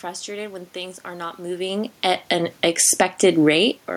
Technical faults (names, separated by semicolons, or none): automatic gain falling; automatic gain rising